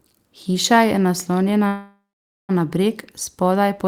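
From 1.67 to 2.51 s, a call audio freeze: delayed packets likely emptied the jitter buffer, so after "je naslonjena" the sound fades into silence, then resumes intact at "na breg".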